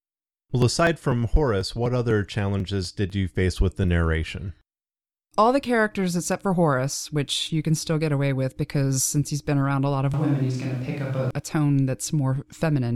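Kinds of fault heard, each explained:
Periodic USB or driver dropouts: A background task stalls the USB bus or audio driver at a fixed interval, so about 2 ms of audio is skipped each time. Here the losses recur every 0.248 s from 0.13 to 3.84 s, around fifteen of them, heard as regular ticks during the speech.
Switch to a distant microphone: The close microphone's signal likely dropped out, leaving a more distant one in use. From 10.14 to 11.31 s, after "been around a lot" and before "a tone", the speech turns suddenly roomy and hollow, with little change in level and room noise roughly 30 dB below the speech.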